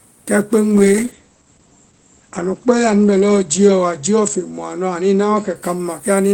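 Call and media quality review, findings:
Call bitrate drop, 0.73–5.61 s: speech turns rough and muffled. Encoder rate control fell from 32 to 12 kbps, bottoming out for 2.5 s. Spectrogram shows content above 8 kHz vanishing, was 20 kHz; coarse, smeared harmonics.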